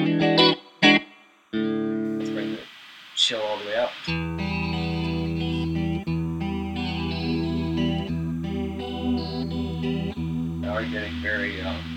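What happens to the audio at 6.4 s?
At 6.4 s, two faults overlap. Timecode bleed runs through the whole clip: 30-frame-per-second linear timecode leaks in from an adjacent track or cable, well below the programme level, heard as a steady chirping warble alternating between 1 kHz and 2 kHz.

Pre-emphasis left on also applies, from 2.05 s to the end. The treble was boosted along a 50 µs FM curve, but the matching de-emphasis was never applied, leaving 10 kHz about 10 dB hot relative to 1 kHz, so the sound is thin, bright and sibilant.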